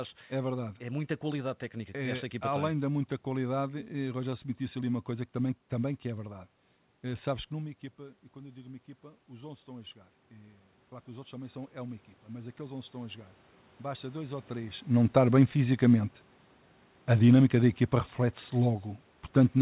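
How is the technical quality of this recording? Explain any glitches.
The recording has one level fault, heard against the narrowband call sound, which has nothing above 4 kHz, consistent with a G.711-style telephone path. Automatic gain rising, 7.09 to 14.87 s: when the talker drew back, input fell about 16 dB, so the gain control crept up about 12 dB, swelling voice and room noise together.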